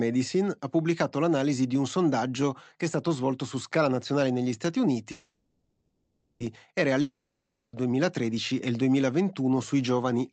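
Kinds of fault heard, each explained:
Call audio freeze: Around 5.11 s the sound stalls and the last bit smears into a fading buzz that runs about 1.3 s to 6.42 s, with barely any true silence. Likely the jitter buffer ran dry waiting on late packets, so nothing's lost, but everything after sits about 1.3 s later.
Long network dropout: From 7.01 s to 7.75 s, about 0.72 s of audio simply never shows up. The receiver stretches the last sound into a brief fading hiss, then you get roughly half a second of silence before the audio resumes further on, likely after lost packets.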